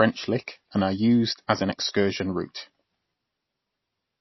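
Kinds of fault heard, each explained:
MP3 compression: The speech sounds watery and swirly throughout, with a metallic, chirping edge on s sounds and softened consonant onsets, and nothing is heard above 5.8 kHz. The likely cause is heavy MP3 encoding at a low rate, fitting something near 24 kbps. Starved of bits, the encoder removed the treble above that fixed point and dropped faint frequency lines that flicker in and out between frames, producing the plainly audible swirl.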